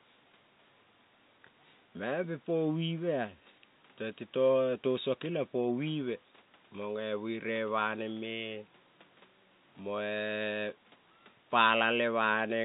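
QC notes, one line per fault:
QC notes: no fault found, so there is no line per fault to give.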